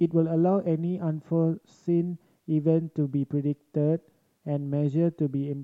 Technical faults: none

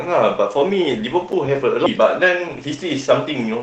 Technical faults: block of digital silence; skip ahead; jitter buffer speed-up

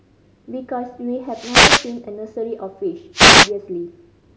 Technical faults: wireless microphone noise hit

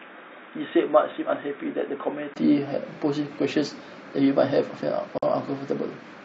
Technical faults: input switched to a poorer device; gap at a join of encoded pieces

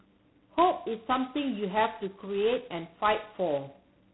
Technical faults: G.726 ADPCM

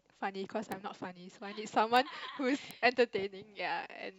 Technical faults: bit error spike

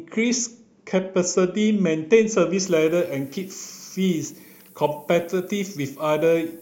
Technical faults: low bit depth with noise shaping

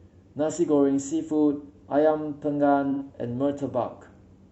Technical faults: AAC frame loss with concealment

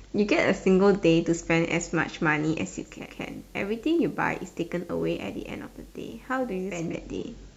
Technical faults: digital radio blending to analogue

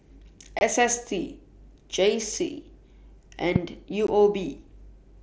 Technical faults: unconcealed Bluetooth headset packet loss; loud pop

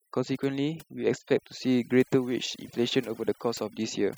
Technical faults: overdone noise removal

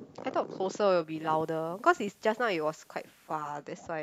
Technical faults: digital radio blending to analogue

